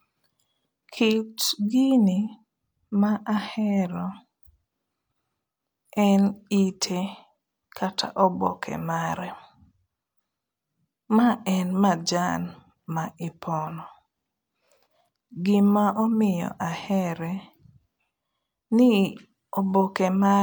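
Low-bitrate audio saved at a high bitrate runs through the whole of this speech clip. The spectrum reaches up to about 20.1 kHz, so there is no telltale low cut-off, but the artefacts of a much lower-bitrate first encoding remain audible. Their character fits a source that was likely HE-AAC at around 48 kbit/s, later saved as MP3 at around 256 kbit/s. The larger second file cannot restore what the first encoding discarded, and it adds almost nothing of its own.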